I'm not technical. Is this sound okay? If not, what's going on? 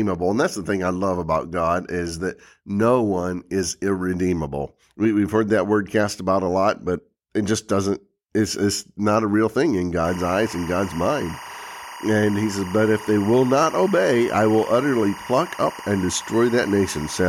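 No. From 10.05 s, just after "a real thing in", to the end, there's timecode bleed: a syncing signal for video gear leaks in from a nearby track or cable. It adds a steady chirping warble, flicking between two beeps, behind the speech.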